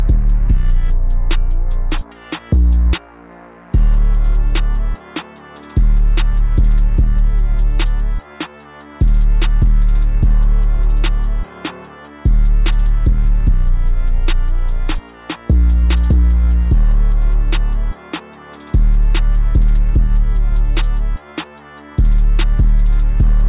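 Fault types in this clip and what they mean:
No fault types are present in this clip, so there is nothing to list or explain.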